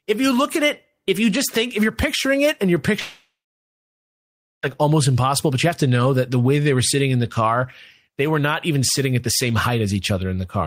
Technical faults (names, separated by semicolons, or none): long network dropout